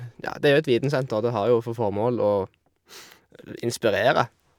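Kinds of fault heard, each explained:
No audible faults detected.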